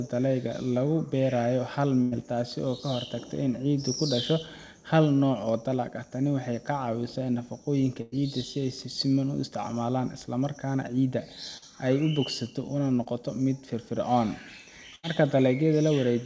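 At 2.02 to 2.14 s, 8.02 to 8.14 s and 14.95 to 15.05 s there's a burst of packet loss. Around 100 ms (80 ms in the last one) never arrived, so the receiver stretched the last sound into a fading buzz or hiss, then jumped ahead with that stretch gone.

Two smaller hits of short concealed packet loss come at 11.58 to 11.64 s (about 40 ms lost) and 13.04 to 13.07 s (about 20 ms). The decoder patched each gap from the preceding sound, giving a quick smear or wobble before blending back.

Underneath, the call path's band limit leaves nothing above 8 kHz, which fits G.722.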